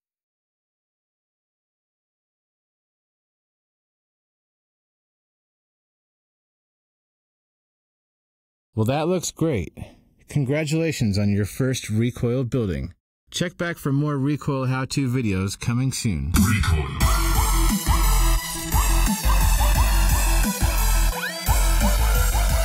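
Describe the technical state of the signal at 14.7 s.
At 14.7 s the signal shows channels drifting apart, present throughout the clip. Two sources on separate clocks, off by roughly 70 ppm, let the inter-channel delay grow toward about 1.5 ms. Summed to mono, this produces slow flanging, seen on a spectrogram as comb notches gliding steadily across the spectrum.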